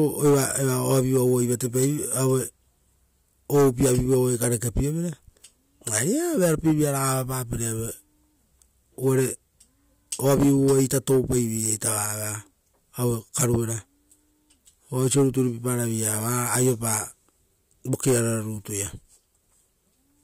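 There are no technical faults to describe in this speech recording.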